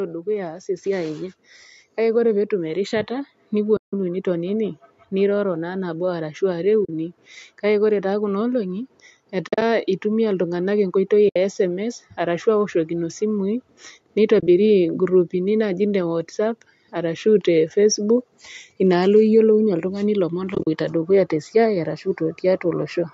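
Speech, with automatic gain rising across nearly the whole clip, from 0.26 to 22.92 s, lifting voice and background together by about 12 dB. Because both swell in step, it is the input gain climbing rather than the talker getting louder. AAC frame loss with muting leaves soft-edged holes at 3.77 s (160 ms), 6.85 s (40 ms), 9.48 s (scattered over 140 ms), 11.29 s (70 ms), 14.40 s (scattered over 80 ms) and 20.55 s (scattered over 120 ms). In each, lost frames were replaced by silence and the overlapping windows fade the sound out and back in, unlike the abrupt, clicking edges of a sample-level dropout.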